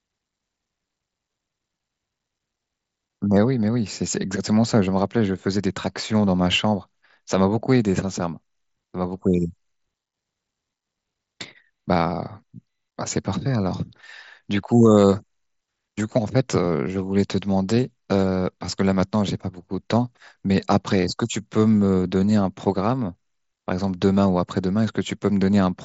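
No technical faults occur anywhere in the speech, which comes through a Bluetooth mSBC headset link with nothing above about 7.7 kHz.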